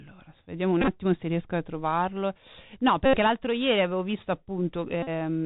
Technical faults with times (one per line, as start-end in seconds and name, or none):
0.00-5.46 Bluetooth CVSD headset codec
0.81-0.88 Bluetooth headset packet repeated
3.06-3.17 Bluetooth headset packet repeated
5.03-5.09 Bluetooth headset packet repeated